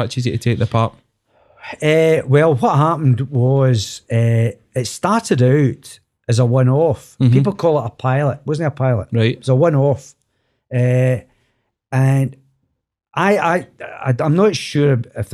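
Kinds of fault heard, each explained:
No technical faults can be heard in this recording.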